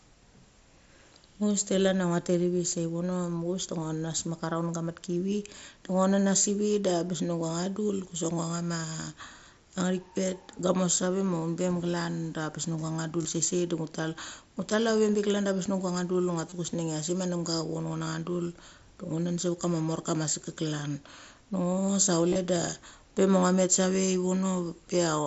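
Speech carried over a Bluetooth headset link using the mSBC codec, with audio reaching up to 8 kHz. The fault is concealed Bluetooth headset packet loss. Brief buzzy patches of about 23 ms occur at 13.23 to 13.25 s and at 16.50 to 16.52 s. Each fits three lost 7.5 ms frames. From 22.29 to 22.38 s, about 60 ms is lost in scattered pieces across 90 ms. The longest run there lasts about 23 ms. The receiver fills each gap by repeating a matching stretch of recent waveform.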